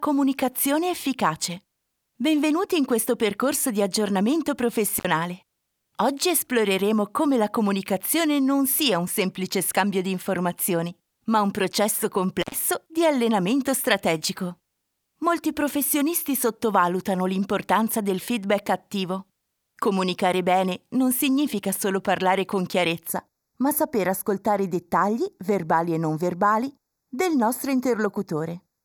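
An intermittent contact, a loose cable or plug briefly opening, breaks the signal path at 4.98 s for about 55 ms and again at 12.42 s for about 92 ms. Each time the sound drops out abruptly, with crackle as the connection breaks and remakes, leaving faint hiss in the gap.

From 23.08 s to the end, a channel delay (comb filtering) occurs: one channel lags the other by a fraction of a millisecond before they are summed to mono. Content common to both cancels at evenly spaced frequencies, the first notch around 3 kHz, so the sound turns hollow and phasey.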